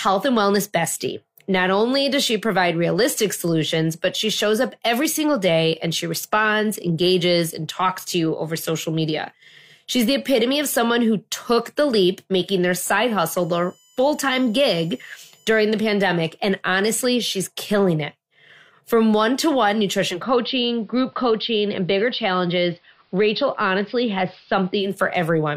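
From 13.41 to 15.62 s, between "leap making their side" and "the pandemic", a thin, steady whine sits under the speech. This is USB whine: the bus's 1 ms frame activity leaks into the audio through the supply or ground, producing a 1 kHz tone with a ladder of harmonics, strongest at 7 kHz, roughly 35 dB below the speech. Unlike mains hum, it is high and exactly locked to multiples of 1 kHz rather than 50 or 60 Hz.

After "one to one", at 20.07 s, the sound blends from digital to analogue, crossfading over 167 ms to an AM broadcast of the same station until 24.94 s, when it returns. The speech drops about 1 dB in level and picks up a faint hiss around 40 dB down. A plain low-pass filter or codec bandwidth drop would bring no new hiss and no short crossfade at each end.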